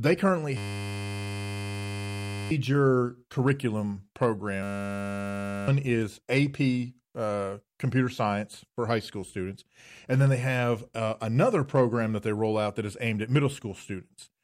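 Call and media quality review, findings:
Steady 100 Hz buzz replacing speech, 0.57–2.51 s and 4.63–5.68 s; system hang loop, driver stall replaying a 10 ms buffer; roughly 2 s and 1 s of audio lost.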